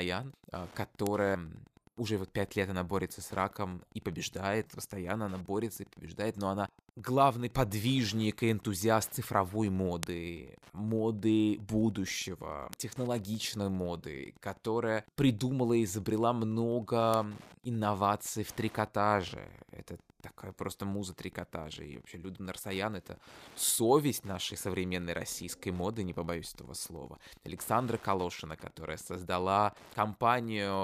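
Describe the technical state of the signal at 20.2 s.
At 20.2 s you're hearing Wi-Fi interference, and it isn't confined to that moment; it runs under the speech for the whole clip. A nearby Wi-Fi radio's beacon gets picked up and rectified by the audio circuitry, so every 102.4 ms there's a little tick, close to ten a second, giving a steady ticking bed. It sits roughly 30 dB below the speech, so it's faint.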